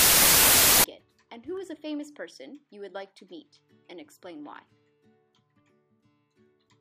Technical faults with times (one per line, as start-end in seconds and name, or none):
0.00-0.84 wrong sample width